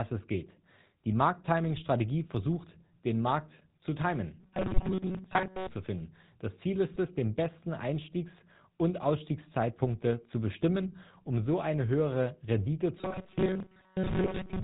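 GSM full-rate codec coding runs through the whole speech clip, and the damage is plainly audible. The codec rebuilds the voice from a vocal-tract filter fed by evenly spaced pulses, keeping only a third of the excitation samples, and the sound fits its 13 kbps rate. Nothing reaches above 4 kHz, so the voice is dull and boxy, with a constant buzzy, gravelly roughness laid over every syllable.

GSM bit errors first hit at 1.77 to 1.82 s, a burst short enough to point to about two decoder frames. Corrupted bits in the filter, pitch or gain parameters warp the spectrum for that instant. The result is a brief squawk and pop breaking through the coded voice. Later bursts are heavier.

Robotic sound from repeated short buffers begins at 4.40 s and lasts until 5.69 s. The voice turns into a stiff metallic buzz at 188 Hz that only loosely follows the speech. The likely cause is new audio arriving too seldom, so the player loops its last buffer, about 5.3 ms long, while most of the real audio in that stretch is dropped. 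That repeat length sets the fixed pitch.

GSM bit errors strike again inside that robotic passage, at 4.76 to 4.83 s. This burst is the densest in the clip, at roughly 3% of bits flipped, and it sounds like about three frames' worth. It adds a sharp gargling squawk on top of the buzz.

GSM bit errors return at 6.88 to 6.97 s, the longest burst, about five frames, at roughly 2% of bits flipped. The decoder's bent filter and pitch values make the voice gargle and crackle across that tenth of a second. It comes through as a rough, bubbling break in the speech rather than a single click.

Robotic sound from repeated short buffers returns at 12.98 s and runs to the end at 14.63 s. It is the same rigid 188 Hz metallic buzz, which fits a loop of about 5.3 ms of audio, with most of the real signal skipped. The likely cause again is audio arriving too seldom for the player, which fills each gap by repeating its last short buffer.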